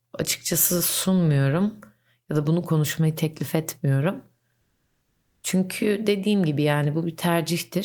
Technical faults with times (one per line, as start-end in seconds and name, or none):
4.61-5.43 comfort noise in place of the background